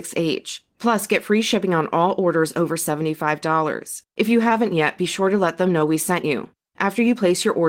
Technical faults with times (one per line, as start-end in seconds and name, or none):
0.00-7.68 clock drift between sender and receiver
0.15-7.66 repeated timing corrections